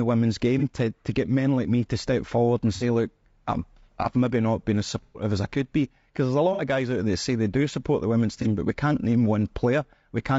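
From the start the speech is rough and grainy, with noise filling the gaps between harmonics and a thin top band, likely low-delay AAC compression around 32 kbps; a spectrogram shows smeared harmonics. AAC frame loss with concealment then leaves smeared, noisy patches at 0.59–0.63 s before "to to get men", 2.75–2.83 s after "to step forward and", 5.03–5.23 s after "maybe not been as", 6.53–6.61 s and 8.42–8.47 s. These appear as blurred, noise-filled vertical strips in the spectrogram.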